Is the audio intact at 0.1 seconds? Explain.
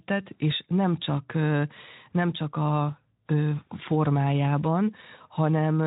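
Yes, the audio is intact at 0.1 s, with no fault at that moment.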